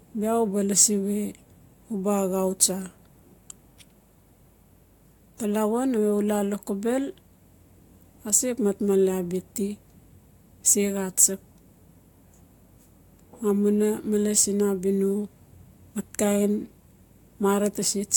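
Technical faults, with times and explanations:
No technical faults can be heard in this speech recording; the signal stays continuous throughout.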